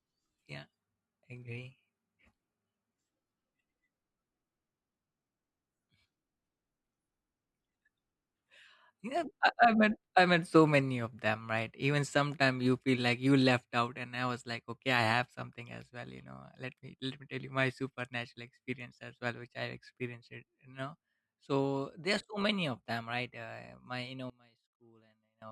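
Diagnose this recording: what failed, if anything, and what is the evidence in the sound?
The failure is at the analogue wiring stage. From 24.30 s to 25.42 s the speech suddenly drops by about 23 dB. What remains is faint. The centred voice almost disappears. The likely cause is one channel inverted, a reversed-polarity stereo channel. When the two channels are summed to mono, everything common to both cancels. Only the small difference between left and right survives, leaving this faint residue.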